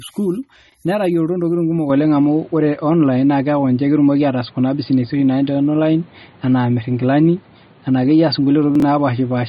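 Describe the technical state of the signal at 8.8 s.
Around 8.8 s the sound jumps and stutters for a fraction of a second. This is chunks out of order, between 8.75 and 8.82 s. A piece of audio about 23 ms long arrived two chunks late, so it plays after material that should have followed it. Nothing is missing, but the sequence is scrambled and the three hard joins where the order breaks produce the garbled moment.

The same moment also sounds narrow and boxy, because the input has been on a poorer device since 1.90 s. The most likely cause is that recording moved from the original microphone to a lower-grade input, such as a headset's call profile, with no gap at the changeover. Nothing reaches above 4.8 kHz, so the sound is muffled. The level shifted by roughly 5 dB, and a new noise floor sits only about 30 dB under the signal.

Over all of this lies a watery, swirling texture with smeared attacks. 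That is MP3 compression. The treble stops dead at 11.8 kHz, and weak frequency lines flicker in and out from frame to frame. The damage is plainly audible, which fits a low bitrate of around 32 kbps, likely the result of the encoder running short of bits and discarding detail it judged least important.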